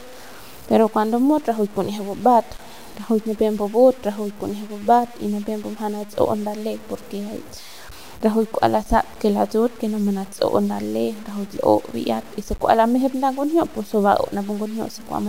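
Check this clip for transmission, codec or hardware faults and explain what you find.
One fault runs through the whole clip: low bit depth without dither. The speech carries a grainy distortion that follows the signal, sitting only about 25 dB below it. That points to the samples likely being truncated to around 7 bits with no dither. Quiet syllables turn gritty and word tails sputter between levels. On a waveform, the quiet stretches show visible staircase steps. On a spectrogram, the distortion appears as broadband smear that rises and falls with the speech rather than a steady noise floor.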